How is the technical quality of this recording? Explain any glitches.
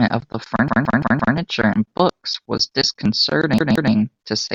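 The recording has two stutters caused by a repeated buffer. Audio failed to arrive in time, so the device replayed its last 171 ms chunk, which fits an 8192-sample buffer. From 0.68 to 1.37 s one piece of speech sounds five times in a row, and from 3.58 to 3.93 s another sounds three times. Each repeat has a hard join, and nothing appears to be skipped.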